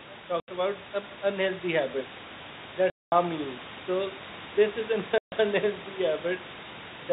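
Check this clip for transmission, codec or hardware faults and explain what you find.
Three silent gaps break the speech, at 0.4–0.48 s (80 ms), 2.9–3.12 s (220 ms) and 5.18–5.32 s (140 ms). This is packet loss filled with silence. The receiver got no packets for those spans and played pure silence in their place. All three lengths fit whole 20 ms packets. Each hole starts and ends abruptly. The gaps are dead silent, with even the room noise gone, whereas concealment would smear or repeat the surrounding sound.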